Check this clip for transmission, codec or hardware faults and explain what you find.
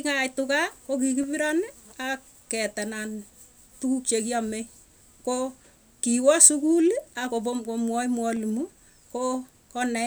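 Two brief faults are present in this speech clip, both clicks consistent with dropped samples. At 6.46 s and 8.37 s a single sharp click sounds, likely from a fraction of a millisecond of samples going missing, so the waveform jumps abruptly to a later value. Unlike a dropout, no sound is lost and no gap is heard, just the thin instantaneous tick.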